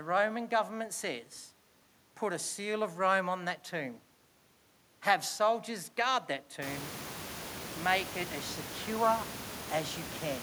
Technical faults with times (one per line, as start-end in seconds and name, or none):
none